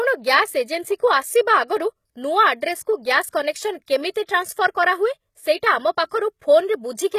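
From start to finish the speech carries plainly audible damage, likely from HE-AAC compression at a rate that fits about 20 kbps. The treble is rebuilt from copied lower bands, so s sounds turn gritty and lispy. Nothing remains above 14.9 kHz.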